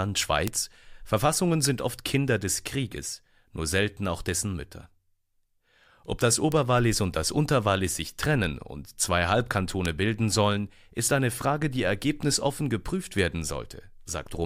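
At 0.48 s, a bit error spike puts a single sharp tick, about -3 dBFS, into the speech. It is a flipped bit in one stored or transmitted sample: the value jumps by a power of two and snaps straight back. Quieter ticks, about -9 dBFS, follow at 6.52 s, just before "und das", and at 9.86 s, just before "bilden sollen ist eine". The last one spans three corrupted samples in a row. Unlike an edit click, none of these ticks leaves a step or gap, and each has a broadband character that bears no relation to the voice around it.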